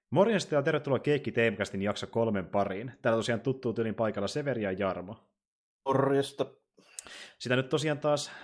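Nothing in this speech recording stands out as a technical fault; the audio runs along without any dropouts, glitches or other problems worth pointing to.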